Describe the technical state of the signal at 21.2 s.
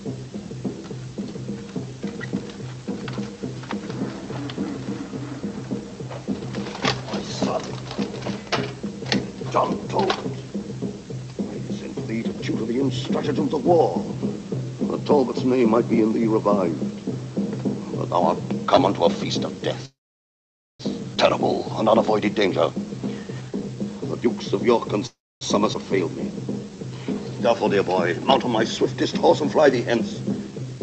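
A skip ahead happens between 21.15 and 21.18 s: roughly 0.7 s of audio was dropped while later audio was already waiting, so playback leaps forward. The sound on either side is spliced almost directly, with only a tiny bridging gap.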